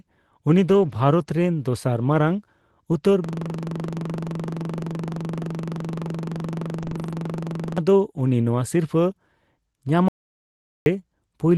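From 0.69 to 0.91 s, a lost packet rebuilt from error correction: about 120 ms was reconstructed from low-bitrate redundant copies, so there is no gap, but the sound turns rougher and noisier.

From 3.24 to 7.78 s, a system hang loop: one 42.67 ms slice, which fits a 2048-sample buffer, repeats exactly at 23.4 Hz.

Within it, from 6.81 to 7.11 s, a second error-correction rebuild covers about 160 ms with the same rougher texture.

From 10.08 to 10.86 s, an audio dropout to silence: 0.78 s of silence with no room tone, likely from the input briefly disconnecting or muting.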